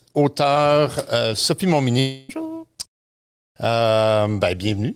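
From 1.99 to 2.31 s the speech turns into a fading buzz continuing the last sound, likely a long network dropout, with 0.3 s never played.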